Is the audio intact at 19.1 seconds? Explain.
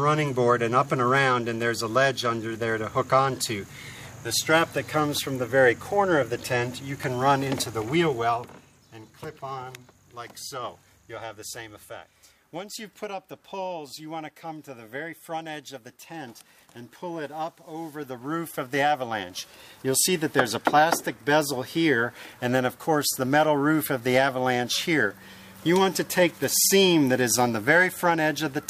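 No. At 19.1 seconds the sound carries a fine ticking, zipping texture, part of a zipper noise episode from 17.90 to 19.22 s. During that stretch the level moves by roughly 15 dB, but the change is applied in discrete jumps, around a hundred a second, with no smoothing between them. Each abrupt step puts a tiny click into the waveform, and the rapid train of clicks rides on the sound as an audible buzz while the level travels.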